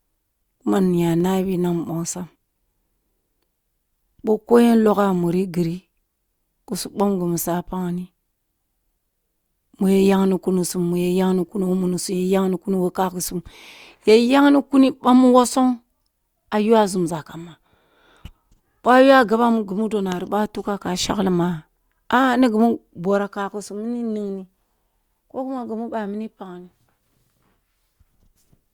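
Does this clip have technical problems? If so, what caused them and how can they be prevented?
Yes. At 1.20 s, just before "na mbongsam", a single sharp click is likely from dropped samples: a fraction of a millisecond vanishes, so the waveform jumps. Unlike a dropout, no sound goes missing. Prevent it with adequate buffering and a stable clock.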